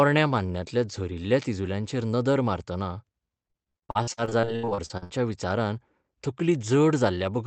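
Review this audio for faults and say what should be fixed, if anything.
From 3.47 to 5.12 s there's repeated packet loss with a robotic sound: about 20 holes, the longest 75 ms, patched by stretching earlier audio, so roughly 40% of that stretch is filler. A deeper jitter buffer, forward error correction and a steadier network link would keep this from happening.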